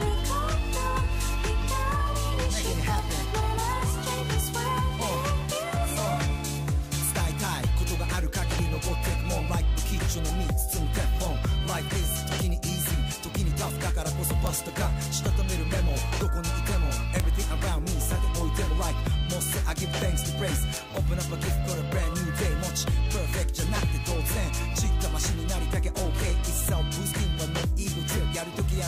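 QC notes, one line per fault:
2.99 to 20.77 s, bit error spikes: five isolated ticks at 2.99, 10.60, 14.47, 17.20 and 20.77 s, each a single corrupted sample except the pair at 17.20 s. A flipped bit pushes the value by a power of two and it snaps back, peaking at about -13, -25, -7, -7 and -7 dBFS. Each is heard as a dry click unrelated to the surrounding sound. On a waveform it shows as a one- or two-sample needle, and on a spectrogram as a thin full-height vertical line.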